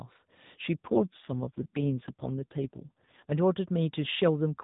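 From 0.78 s to 3.32 s the speech goes through an AMR rate drop, with the bandwidth unchanged and no gap. The codec steps down to fewer bits per frame, turning the voice rougher and buzzier, which fits a fall from 12.2 to 4.75 kbps, before the narrowband AMR sound recovers.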